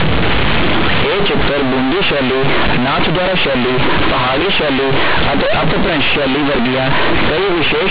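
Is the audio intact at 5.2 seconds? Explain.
No. At 5.2 s, as across the whole clip, the speech suffers companded audio read as linear: mu-law bytes are played as raw 8-bit samples without expansion. Small sign changes swing the output across half its range, producing loud, buzzy distortion and heavy noise in pauses.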